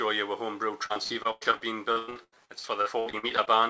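From 0.86 to 3.49 s, repeated packet loss leaves gaps up to 106 ms, each patched by extending the last sound, so about a third is concealed and the audio turns choppy and robotic.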